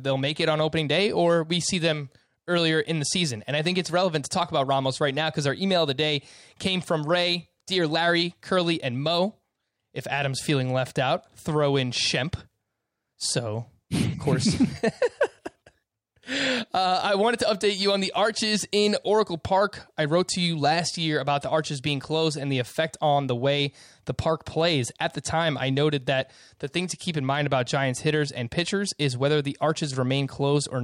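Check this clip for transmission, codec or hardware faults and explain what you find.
I find no faults in this clip.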